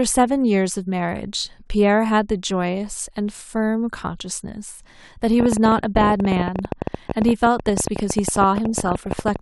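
From 5.40 s to 9.37 s, a train of clicks runs over the speech. The clicks come about 15.4 times a second at an uneven pace, roughly seventy in all. They peak around 15 dB above the signal. Nearby electrical interference is the likely cause.

From 8.54 s to 9.21 s, DAB burbling joins in. Bit errors slip past the error correction into the MP2 data. Wrong samples put short blips of noise in single sub-bands. It hits 29 frames, with roughly one percent bit errors.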